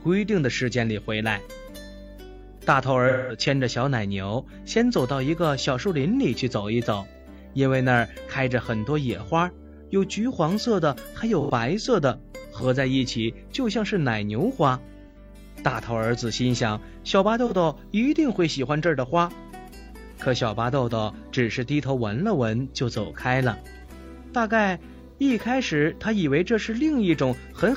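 AAC frame loss with concealment at 3.08–3.40 s, 11.40–11.50 s, 15.07–15.17 s, 17.46–17.53 s and 25.09–25.19 s: the decoder patches missing frames from the last good spectrum, producing brief smeared, phasey noise rather than the clean silence of a dropout.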